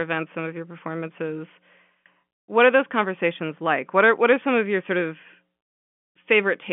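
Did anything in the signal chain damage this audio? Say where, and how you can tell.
No, nothing in the chain damaged this speech: it sits in a telephone band of roughly 150 Hz to 3.4 kHz with nothing above about 3.6 kHz, which is simply what G.711 telephone coding does to any signal it carries.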